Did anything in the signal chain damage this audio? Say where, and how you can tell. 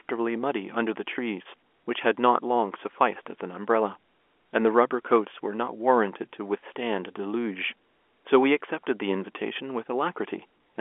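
No, nothing in the chain damaged this speech; it's just an ordinary phone line with G.711 telephone coding, so the sound sits in the usual narrow 300 to 3400 Hz telephone band.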